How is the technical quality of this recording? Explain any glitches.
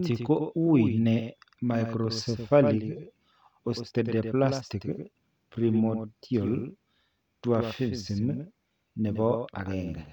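The recording has one clear fault, and it runs through the whole speech clip: a doubled audio track. A second copy of the speech sits under the first, roughly a tenth of a second late. It is around 10 dB quieter. The copy is full-band and dry, with no decay or room colour. So it sounds like a flat, mechanical slapback rather than an echo. The likely cause is the same signal being captured twice, once through a slower path.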